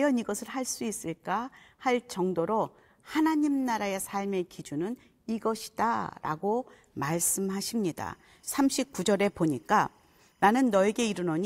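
At 8.04 s, timecode bleed enters behind the speech and runs to the end of the clip. Linear timecode from a nearby track or cable is leaking in. Its square wave, running at 25 frames per second, flips between roughly 1 and 2 kHz. It sounds like a faint chirping warble, around 45 dB below the speech.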